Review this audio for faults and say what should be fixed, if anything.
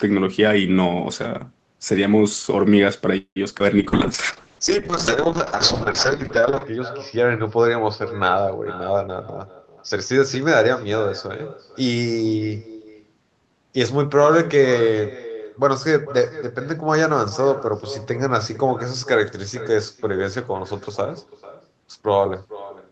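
Echo with no canceller runs through the whole call: every phrase returns about 16 dB quieter and around 0.4 s later, thinner and roomier, because the far end's loudspeaker feeds its microphone. A fixed, repeating delay marks it as echo rather than reverberation. Enable acoustic echo cancellation or use headsets at the far end.

A call audio freeze sits at 3.17 to 3.38 s. The sound stretches into a fading buzz and then goes silent for about 90 ms before resuming where it left off. That inserts roughly 190 ms with nothing lost, which is what sets it apart from packet loss. The likely cause is delayed packets draining the jitter buffer. Stabilise the network path or allow a deeper jitter buffer.

Short concealed packet loss occurs at 3.50 to 3.53 s and 3.59 to 3.62 s. Each is a brief smear or wobble where about 20 ms never arrived and was patched by extending the previous sound. Unlike the freeze, the audio is shortened rather than delayed. 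Adding forward error correction would cover these.

A call bitrate drop lasts from 3.79 to 12.67 s. Opus falls from 32 to 7 kbps and stays at its lowest for about 2.8 s, which makes the sound rough and watery. This is a sustained loss of fidelity, not a dropout. Adding bandwidth headroom or using a better congestion estimate would prevent it.

A jitter buffer speed-up runs from 9.06 to 10.18 s. The audio plays at about 117% speed with unchanged pitch, so it sounds hurried, because roughly 0.2 s of pitch periods were trimmed to reduce built-up delay. The unchanged pitch separates it from a clock or sample-rate error. Smoothing packet delivery avoids this.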